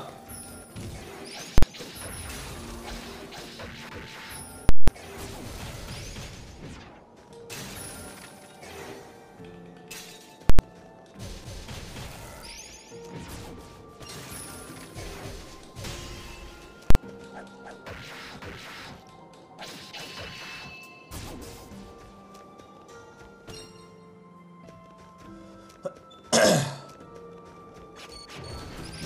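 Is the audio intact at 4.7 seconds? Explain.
No. At 4.69 s there are invalid numbers at full scale, lasting until 4.88 s. A calculation went to infinity or an undefined result, and those values were clamped to the maximum level, so the output is pinned at one extreme value, far beyond the audio's peaks, for about 0.19 s, which fits an 8192-sample processing block. The result is a very loud pop at 4.69 s and another at 4.88 s, with no sound between them.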